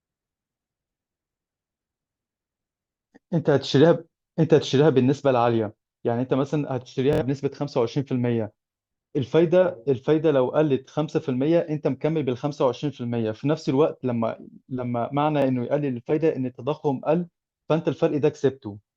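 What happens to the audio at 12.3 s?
Nothing goes wrong at 12.3 s; the speech carries on intact through that moment with no dropout, click, glitch or other fault.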